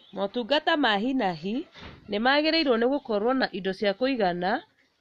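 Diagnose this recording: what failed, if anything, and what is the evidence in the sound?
Nothing failed; no fault is audible in the speech.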